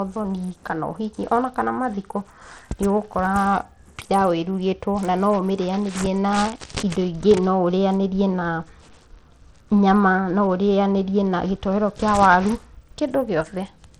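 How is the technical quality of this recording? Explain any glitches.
The recording has plainly audible codec damage throughout the speech, likely from Bluetooth SBC compression. For the full length, the top end thins and flickers in and out, with a gritty, grainy layer and aliasing riding on the sound. SBC splits audio into a few wide sub-bands and shares a small bit budget among them without a hearing model. The weaker treble bands get too few bits to hold steady, and the rest are coarsely quantised. The degree of damage fits a low setting around 80 kbps.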